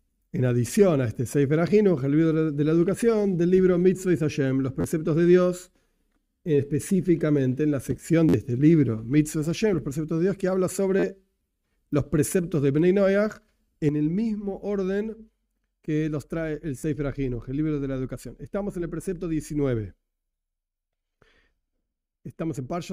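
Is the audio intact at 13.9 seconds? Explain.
No. A sudden gain jump at 13.89 s drops the level by about 7 dB and holds it there to the end. The sound and its background noise fall together in one step, likely from a digital gain change applied between adjacent samples without any ramp.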